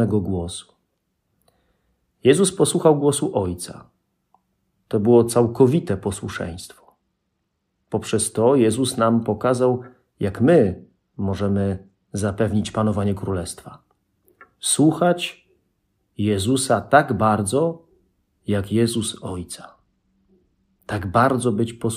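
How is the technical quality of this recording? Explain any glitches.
Three short stretches lose quality, at 5.25 to 8.30 s, 10.30 to 13.12 s and 18.92 to 21.47 s. Each is a Bluetooth SBC bit pool drop. The treble dulls and gritty noise rises, which fits the bit pool falling from 31 to 15, near 105 kbps. Top sub-bands starve, and the rest quantise coarsely.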